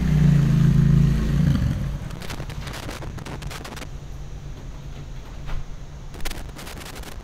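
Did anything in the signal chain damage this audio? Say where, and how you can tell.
Yes, loose connector crackle in the analogue wiring, from 2.10 to 3.85 s and again from 6.14 s to the end. A worn contact keeps making and breaking, chopping the sound into irregular scratchy bursts. These show as ragged dropouts and spikes in the waveform, with broadband vertical streaks on a spectrogram.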